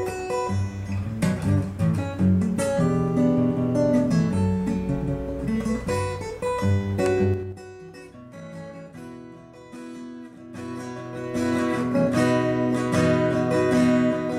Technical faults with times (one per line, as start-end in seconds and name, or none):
7.24-7.62 zipper noise